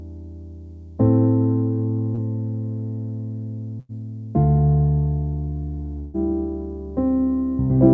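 At about 2.15 to 2.21 s there's a short concealed packet loss. Roughly 30 ms of the stream never made it to the decoder in time, so the receiver patched the hole by carrying the preceding sound forward and then easing back into the real audio. You hear it as a quick smear or wobble rather than a dropout, and whatever was in that sliver is gone.

Then come two bursts of packet loss. The first, from about 3.80 to 3.92 s, loses around 90 ms. The second, from about 5.99 to 6.17 s, loses around 150 ms and never drops to silence. In both, the receiver keeps extending the last sound while fading it down, giving a held buzz or dying hiss before the audio picks up again further along, with the stretch in between simply missing. Everything sits below 8 kHz, which fits a 64 kbps G.722 call path.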